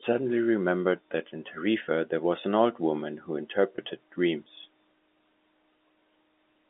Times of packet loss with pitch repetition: 3.76-3.78

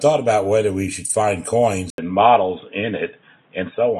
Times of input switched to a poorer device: 1.90-4.00

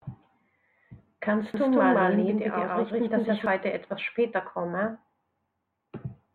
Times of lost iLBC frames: none

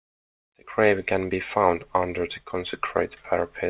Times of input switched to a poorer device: none

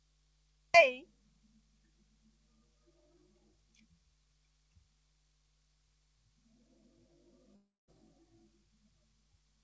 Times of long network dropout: 7.56-7.91

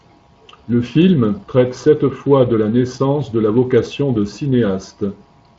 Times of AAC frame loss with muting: none

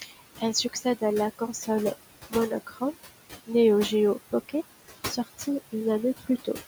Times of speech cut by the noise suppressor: 0.02-0.20, 0.64-1.02, 2.67-2.94

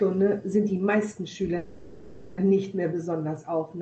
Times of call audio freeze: 1.57-2.40

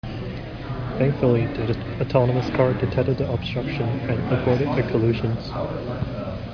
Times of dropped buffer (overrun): none

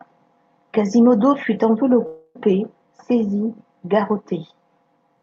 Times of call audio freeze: 2.06-2.36

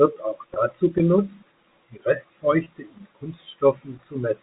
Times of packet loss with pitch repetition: 0.54-0.56, 2.64-2.66

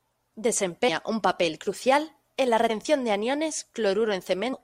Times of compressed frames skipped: 2.69, 4.52

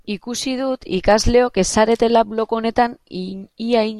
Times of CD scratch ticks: 0.56-1.11

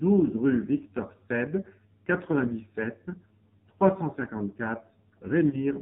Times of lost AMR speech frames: 5.50-5.63

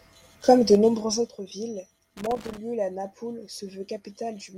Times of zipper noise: 0.68-1.37

